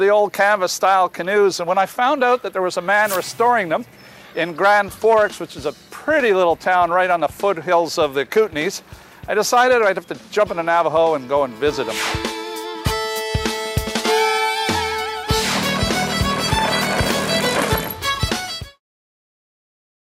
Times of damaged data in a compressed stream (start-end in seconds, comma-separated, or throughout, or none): none